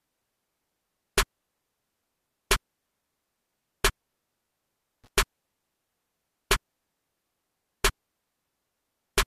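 At 5.04 to 5.08 s there is a short burst of loose connector crackle: a worn or dirty contact briefly making and breaking, chopping the signal into an irregular scratch. The waveform shows jagged dropouts and spikes; the spectrogram, thin broadband vertical streaks.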